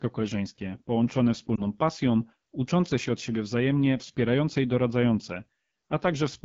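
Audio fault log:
throughout: AMR wideband (HD Voice) codec. The speech has been squeezed through a low-rate wideband voice coder that models the vocal tract and fills the top band near 7 kHz with shaped noise. The plainly rough, raspy texture fits the 8.85 kbit/s mode, one of its two lowest.
1.56 to 1.62 s: lost AMR speech frames. A corrupted radio frame failed its check, so the decoder repeated the previous pitch and vocal tract settings at falling gain. The result is a brief dip or warble, consistent with a single missing 20 ms frame, before the speech recovers weak or rough for a moment.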